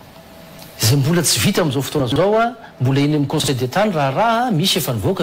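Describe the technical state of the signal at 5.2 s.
At 5.2 s the signal is intact, with no audible dropout, distortion, glitch or other technical fault.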